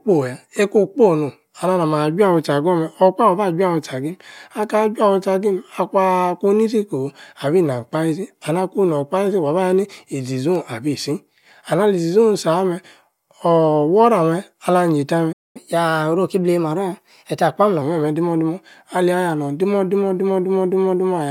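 Playback stall at 15.32 s: the speech cuts out for 225 ms, until 15.57 s, most likely because the player ran short of data or its thread was blocked.

Catch-up at higher speed from 15.57 to 17.82 s: the backlog is resampled at 1.1 times normal speed, raising the pitch by about one and a half semitones until it returns to normal.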